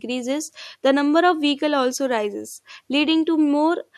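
No technical faults are audible anywhere in this recording.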